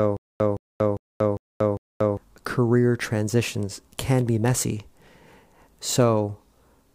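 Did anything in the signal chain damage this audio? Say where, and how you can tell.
Yes, at playback: a stutter with silent gaps runs from the very start to 2.17 s, just before "career transitions can be". A 166 ms fragment repeats five times, each followed by 235 ms of dead silence, every 401 ms. That's likely a stalled stream re-serving its last chunk while the real audio is lost.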